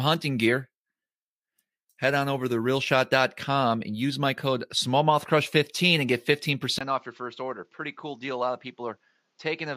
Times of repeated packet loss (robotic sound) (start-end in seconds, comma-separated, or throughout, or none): none